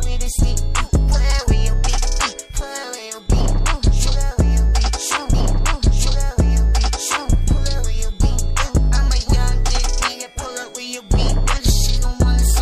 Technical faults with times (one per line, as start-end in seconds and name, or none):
5.30-7.29 stream segment repeated